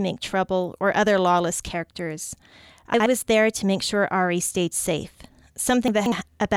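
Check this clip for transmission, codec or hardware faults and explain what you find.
Two spots of chunks out of order, at 2.94 to 3.06 s and 5.88 to 6.12 s. A 60 ms chunk turns up late, one chunk behind at the first and three behind at the second, so the speech jumbles briefly at the hard joins.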